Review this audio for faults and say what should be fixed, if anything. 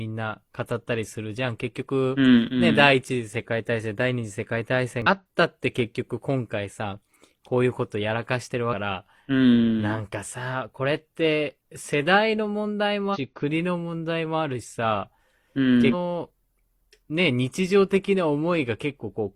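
Three short bursts of damaged data in the compressed stream interrupt the speech, at 5.02 to 5.07 s, 13.10 to 13.17 s and 15.89 to 15.94 s, each lasting about 50 to 70 ms. Corrupted bytes make the decoder misread those frames and hunt for the next valid header, so each spot is heard as a brief chirp, squawk, click or short hole. A plain dropout would leave silence or a smeared fill instead. Verify stream integrity with checksums before decoding.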